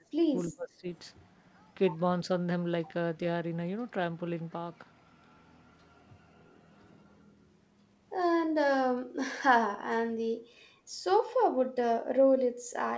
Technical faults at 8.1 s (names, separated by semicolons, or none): none